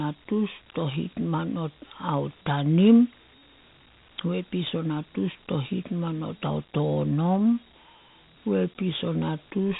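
From start to finish the speech carries Dialogic VOX ADPCM damage. Nothing is heard above 3.8 kHz, which fits an 8 kHz telephone sample rate. The coder stores each sample as a coarse 4-bit step from a prediction, which points to a 32 kbps stream. The step size adapts to the signal level, so the coarse quantization error becomes a gritty hiss that rides along with the speech. The damage is plainly audible.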